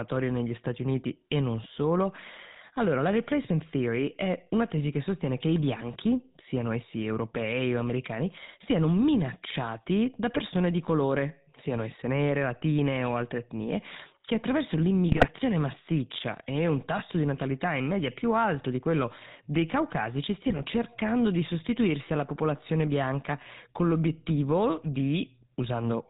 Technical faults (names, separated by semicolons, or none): GSM full-rate codec; GSM bit errors